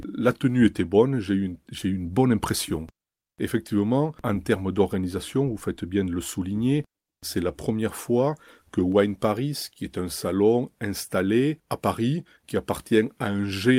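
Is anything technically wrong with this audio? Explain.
No, nothing technically wrong turns up in this speech recording.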